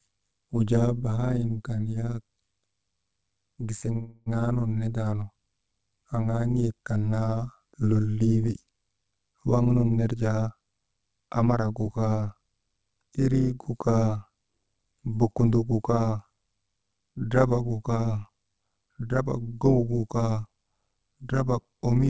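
A speech recording that passed through a call path, with nothing above 8 kHz, which fits the G.722 codec at 64 kbps. The whole clip carries overlap-add ripple. The level swings by about 11 dB at a rate of roughly 100 Hz. That gives a metallic buzz with extra tones on every sound. It comes from framed processing whose overlapping windows do not add back to a steady gain, so loudness pulses once per frame. At 1.26 s to 1.30 s there is a short stall from a late packet. A sound is held about 24 ms too long. A packet arrived late and the receiver stretched the last sound while it waited. Then it carried on from the same point. Nothing is lost, and the delay grows by 24 ms. From 3.93 s to 4.38 s, just before "nun nindaanu", there is a call audio freeze. The sound hangs for about 330 ms as a fading buzz or hiss. It never drops to silence, and the audio resumes where it stopped. The likely cause is held-up packets draining the jitter buffer, which inserts a gap rather than removing anything. 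Jitter buffer speed-up follows twice. From 9.04 s to 11.6 s, right after "kan naa lolii wi", the speech runs at 109% speed. Roughly a fifth of a second is taken out. From 14.78 s to 15.09 s, just before "bokundok gu", it runs at 110%, losing about 40 ms. In both, pitch stays the same but delivery sounds hurried. The buffer had built up too much delay and trimmed it by cutting many small pitch-period pieces.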